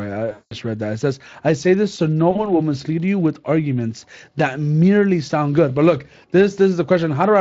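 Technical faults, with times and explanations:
0.31 to 0.54 s and 2.31 to 2.48 s, VoIP packet loss concealed by the speech codec: the decoder lost about 200 ms of audio in the first gap and about 40 ms in the second. It filled each gap by extending its last pitch and filter state at falling gain, which produces a stretched, buzzy tone or coloured noise that fades. Each frame is built from the previous one, so the sound stays weak or smeared for a short time after the audio resumes.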